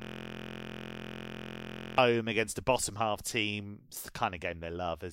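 A system hang loop runs from the very start of the clip, already under way at 0.0 s, until 1.98 s. The driver stalled while the hardware kept replaying one 23.22 ms stretch of its ring buffer, which fits a 1024-sample buffer, 84 times over, producing a steady buzz at 43.1 Hz.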